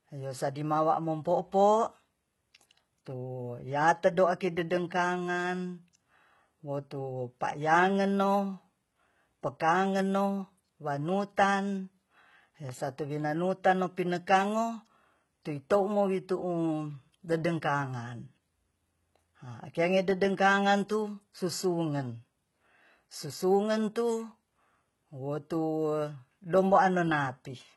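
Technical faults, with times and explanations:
Throughout, HE-AAC compression: the treble carries heavy damage, with s sounds coming out gritty, metallic or lispy, likely from HE-AAC at a rate that fits around 16 kbps. Only the lower spectrum really gets coded. The top end is copied up from below and roughly shaped, so harmonics don't line up.
12.69 to 12.71 s, loud pop: a single sharp pop lands on top of the speech, peaking roughly 5 dB above it, while the talking carries on underneath. That's likely a sudden voltage step or pulse from a plug, switch, static or driver glitch, shaped by the circuits after it.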